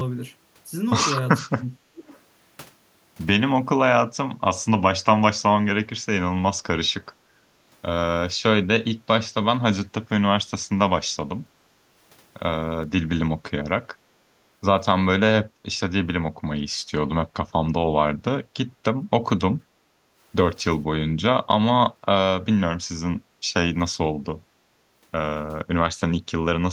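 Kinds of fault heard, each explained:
speech suppressed in double talk: The speech drops by about 35 dB from 1.39 to 2.1 s, likely the echo canceller clamping during overlap. Shorter, shallower dips follow near 10.1, 11.5 and 19.6 s.
echo leak: A faint delayed copy returns at 2.1 s, about 479 ms late and around 35 dB below the speech. It is likely residual loudspeaker echo.
background gated by the echo canceller: The room sound briefly sinks, about 6 dB at 19.93 s and about 8 dB at 23.26 s. The canceller pulled the microphone down.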